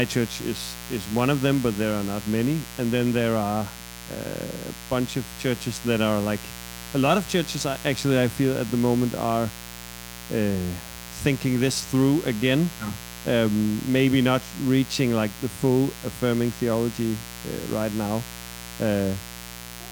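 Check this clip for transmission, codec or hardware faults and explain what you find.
One fault runs through the whole speech clip. Mains buzz, present throughout: sharp switching spikes from the 60 Hz supply leak into the signal twice per cycle, stacking harmonics of 60 Hz up into several kHz. The result is a steady, raspy buzz sitting about 15 dB beneath the speech.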